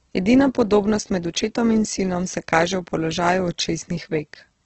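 Opus compression, throughout the speech: everything above 8.1 kHz is missing, and the remaining sound is heavily roughened and grainy rather than swirly. This is likely a CELT-mode encode starved of bits, consistent with a rate near 12 kbps, narrowing bandwidth and filling bands with noise.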